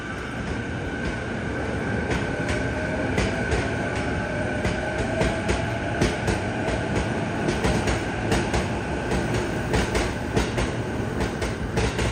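A second capture path or an out-of-step edit likely mixed the audio in twice, giving a doubled audio track: a dry, full-band copy about 5 dB quieter trails the original by roughly one and a half seconds.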